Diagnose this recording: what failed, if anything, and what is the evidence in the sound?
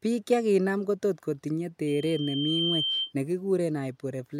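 The acoustic loop between a loudspeaker and the microphone feeding it went unstable, causing loudspeaker feedback squeal at the playback and analogue stage. From 1.87 s to 3.13 s a single tone near 3.1 kHz rises out of the speech, swelling over roughly the first 0.7 s until it is about as loud as the speech itself. At that frequency the loop gain exceeded one, so the tone kept reinforcing itself.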